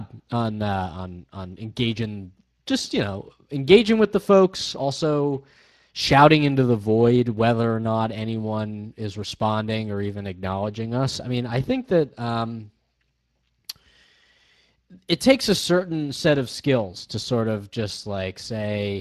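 Speex codec damage runs throughout the speech: sparse CELP excitation leaves it audibly hoarse and noisy, a coarseness that points to a bitrate around 22 kbps.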